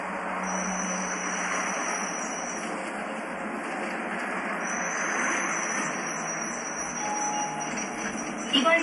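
Throughout the clip, nothing sounds above about 11.3 kHz. The treble stops at a hard ceiling. Weak detail flickers in and out, giving a watery, swirling texture. Transients smear. This plainly audible damage is likely MP3 compression at a low bitrate, around 46 kbps.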